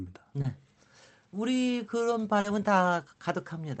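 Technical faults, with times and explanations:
0.41–0.45 s and 2.40–2.45 s, short concealed packet loss: about 30 ms, then 40 ms, of audio missed the decoder's deadline. The receiver stretched the preceding sound across each gap and blended back in, leaving a brief smear or wobble at both points.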